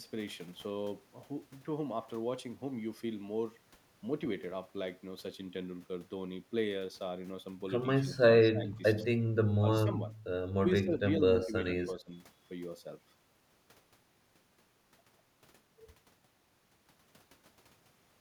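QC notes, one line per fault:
8.18–9.09, 9.59–10.02, 10.8–11.53 and 11.88–12.12 s, speech suppressed in double talk: the speech dips in patches, by around 15 dB at worst, shallower near 12 s, and only part of each span is hit. This is likely an echo canceller turning down the whole signal when both ends talk at once. The speech sags, and no repeated copy is added.
11.39–11.83 s, echo leak: a fainter, delayed copy of the speech, about 115 ms behind and about 10 dB down, rides under the speech. This is likely speaker sound the canceller failed to remove and sent back. Unlike suppression, something is added rather than taken away. At 115 ms it is heard as a distinct repeat, too late to blend in as room reverb.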